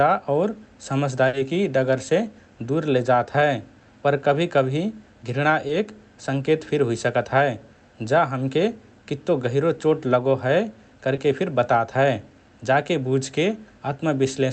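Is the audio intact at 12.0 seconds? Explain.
Yes, at 12.0 seconds the speech is intact, with no dropout, glitch or other fault at that moment.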